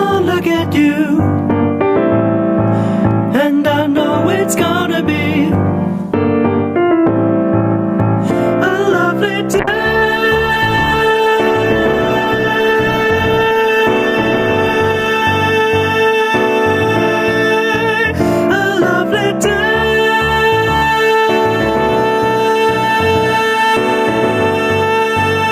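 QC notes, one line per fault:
Throughout: gain pumping. The gain swings around 10 dB. Loud and soft parts sit close in level, so the sound is squashed. The likely cause is gain set far too high, with a fast limiter pulling it down.
9.6 to 15.31 s: call bitrate drop. The sound turns rough and muffled, with the highs cut away. That points to the encoder falling from about 96 kbps to about 17 kbps. It stays at its worst for about 5.65 s before recovering.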